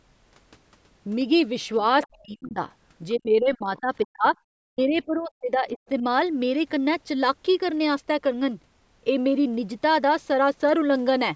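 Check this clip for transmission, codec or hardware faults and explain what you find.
Echo-canceller trouble shows up twice over in this speech: scraps of the far end bleed through, and the near talker is repeatedly pushed down while both sides talk.

Other side's voice leaking through, at 2.03–2.07 s, 3.09–3.19 s, 4.77–4.97 s and 5.18–5.22 s: likely an echo canceller leaving loudspeaker pickup in the microphone signal. Faint fragments of a second voice surface, roughly 20 to 35 dB below the main talker, and brief.

Speech suppressed in double talk, at 2.07–2.6 s, 3.16–4.25 s, 4.6–5.79 s and 6.00–6.04 s: likely the canceller failing to separate the talker from echo and attenuating everything. The voice sinks by as much as around 30 to 40 dB in the longer stretches, with only a slight dip at 6.0 s.

Above 8 kHz the band is empty, consistent with the call's microphone processing.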